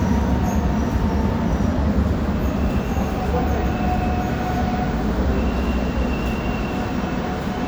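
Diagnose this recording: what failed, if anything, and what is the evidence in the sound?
Nothing failed, and the recording holds no audible evidence of a fault at any stage.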